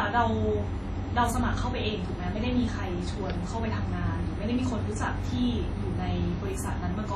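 Speech, with heavy transform-codec damage throughout: a ringing, washy quality and hiss that swells and fades with the voice, likely from WMA compression at a low bitrate near 32 kbps. A spectrogram shows nothing above 13 kHz, patchy gaps where weak components vanish, and smeared energy spreading tens of milliseconds around onsets.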